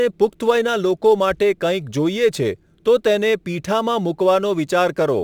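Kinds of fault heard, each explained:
Crude rate conversion: sounds like 44.1 kHz bumped to 48 kHz by repeating samples unfiltered, leaving a gritty inharmonic fizz on the speech, about 30 dB down.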